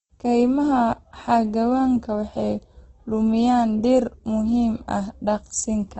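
From start to finish the speech carries heavy codec damage, most likely from Opus compression. Nothing is present above 8.5 kHz, and the bands below it sound rough, grainy and noisy rather than hollow. That points to Opus's music mode at a low rate, around 12 kbps, filling starved bands with folded or noise content. The absence of the watery swirl typical of MP3 is what sets it apart.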